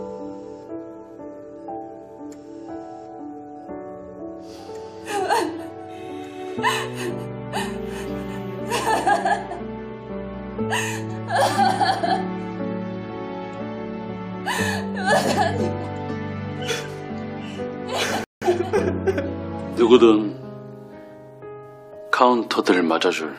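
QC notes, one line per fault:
18.24–18.42 s, rebuffering stall: playback runs dry and halts for about 177 ms, then picks up exactly where it left off, so nothing is skipped but the timeline stretches. The waveform shows a flat silent gap; the spectrogram shows a clean, full-band blank column with abrupt edges.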